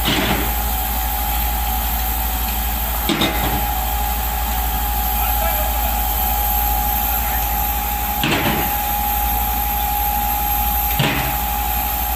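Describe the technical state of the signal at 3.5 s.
At 3.5 s the signal is intact, with no audible fault or disturbance at that point.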